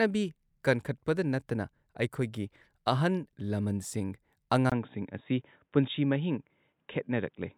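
At 4.70 s the speech drops out for about 20 ms, then returns dull and boxy, with nothing above 3.8 kHz and a faint new noise floor about 55 dB below the speech, at a similar overall level. The input likely switched to a poorer device, which stays in use to the end.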